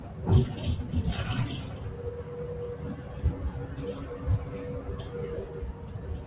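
From start to finish, a noise suppressor applied to these sounds keeps misjudging steady tones and ambience as noise. Attacks pass, but sustained parts and tails sink by around 5 dB, so the level pumps and thins. The narrow band, with nothing above 4 kHz, fits a G.711 mu-law call path.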